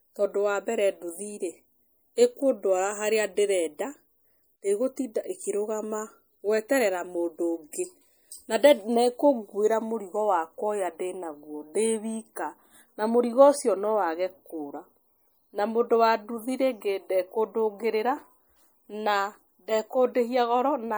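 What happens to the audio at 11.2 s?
At 11.2 s the speech carries the same damage it has from start to finish: a watery, swirly texture, with s sounds breaking into metallic chirps. That's likely MP3 compression, at a level that fits a low bitrate around 64 kbps. With so few bits, the encoder zeroes out weak frequency lines, which flicker on and off between frames, and the attacks smear.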